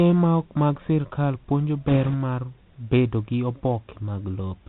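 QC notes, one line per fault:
Throughout, Bluetooth CVSD headset codec: the whole clip has that narrowband headset sound, with nothing getting through above 4 kHz, so the speech is muffled and boxy. The damage is plainly audible: s sounds come out scratchy, a grainy hiss sits under everything, and the louder bright bits distort where the one-bit up/down steps can't keep pace with the waveform and the adaptive step size lags behind. That fits a 64 kbps CVSD link.
1.88–2.15 s, bit errors on a Bluetooth voice link: right after "ok mag sirkal puonjo" and ending before "mar bedo gi", there's a burst of rushing, crackly noise lasting about a quarter of a second. Sounds like around 2 percent of bits flipped. No sharp clicks, though, because in CVSD every bit only nudges the signal by one small step and the codec recovers quickly, so the errors smear into noise rather than pops.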